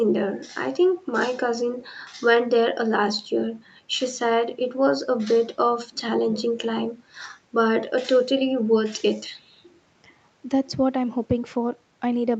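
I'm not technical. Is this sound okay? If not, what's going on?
Yes, this sound is okay; it has just gone through an ordinary call connection, which trims the deepest bass and the very highest treble the way online calls normally do.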